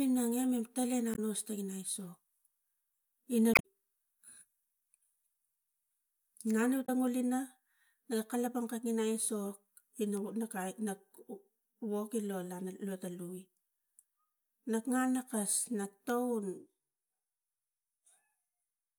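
Damaged data in a compressed stream hits this speech three times: corrupted bytes make the decoder misread its frames and lose sync until it finds a valid header again. Each break is a brief chirp, squawk, click or short hole replacing the speech, first from 1.11 to 1.19 s just after "pala ga", then from 3.52 to 3.65 s, and finally from 6.82 to 6.89 s right after "no lu".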